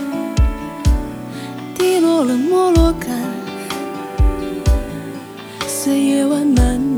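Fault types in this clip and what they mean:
Low bit depth without dither: The audio was likely rounded to 8 bits with no dither, so the rounding error tracks the signal, leaving grainy distortion about 35 dB below it that changes with the sound and roughens the quieter passages.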